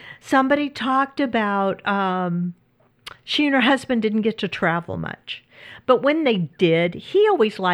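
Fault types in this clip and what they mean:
No technical faults can be heard in this recording.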